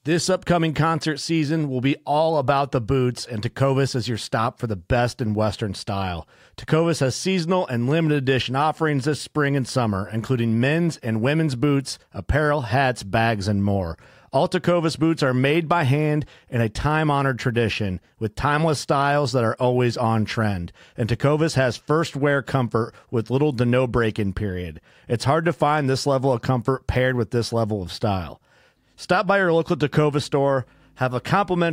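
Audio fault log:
No faults are heard in this speech recording. There is nothing to log for any part of it.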